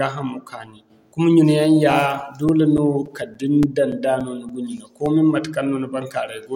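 From 1.63 to 5.35 s the speech carries a run of 14 small, evenly spaced ticks, roughly three or four a second, each a tiny dropout lasting only a few milliseconds. These are CD scratch ticks: a surface blemish passes the laser once per disc revolution, corrupting more data than error correction can restore, so the player mutes or interpolates the damaged samples.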